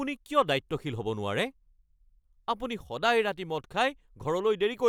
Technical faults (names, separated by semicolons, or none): none